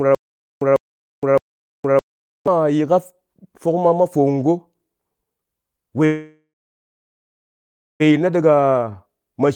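Speech, with a stutter with silent gaps already under way from 0.0 to 2.47 s: a 148 ms burst repeats every 0.61 s, three times, with about 0.47 s of flat digital silence between, showing as identical blocks on the waveform, likely from a stalled stream. A call audio freeze from 6.05 to 8.02 s inserts about 1.95 s, with the last sound smeared as a fading horizontal band and then 1.52 s of silence. Nothing is lost, likely because delayed packets emptied the jitter buffer. A jitter buffer speed-up from 8.11 to 8.50 s runs at 112% at the same pitch, cutting roughly 50 ms of pitch periods, so the harmonics stay level while the features draw closer together. A jitter buffer slow-down from 8.55 to 8.92 s runs at 83% and adds 70 ms, stretching the harmonic stripes without any change in pitch.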